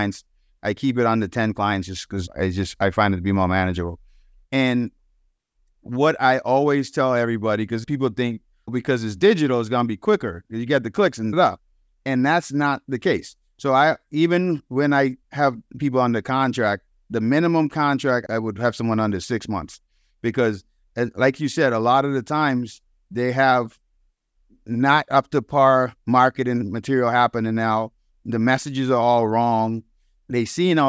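Speech recording, with no audible technical faults anywhere in the clip.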